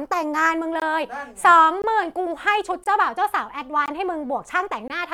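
Gaps between chunks at 0.80, 1.82, 2.84, 3.86 and 4.88 s. Silence is inserted at each 1 s chunk join, heard as 20 ms holes in the speech.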